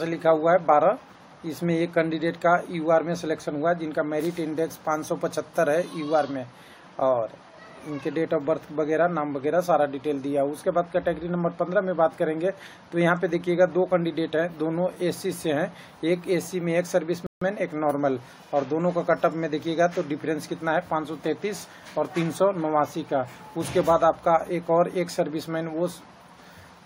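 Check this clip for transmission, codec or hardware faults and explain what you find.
There is one fault, a rebuffering stall from 17.26 to 17.41 s. The player ran out of downloaded audio and paused for 150 ms until more data arrived. The sound drops to silence, then picks up exactly where it stopped, with nothing skipped but the timeline lengthened.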